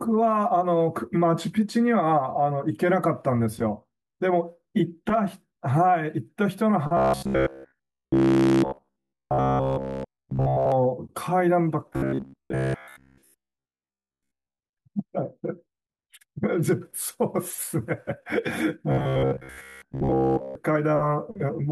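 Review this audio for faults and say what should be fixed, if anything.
Robotic sound from repeated short buffers appears in three stretches of the speech: 6.97–10.72 s throughout, then 11.93–14.59 s and 18.92–20.55 s for most of each span. The speech becomes a rigid metallic buzz at 66.7 Hz that loosely tracks the words. The likely cause is audio arriving too slowly, with the last segment of about 15 ms replayed in place of the missing audio. Prevent it by enlarging the receive buffer or using proper packet-loss concealment.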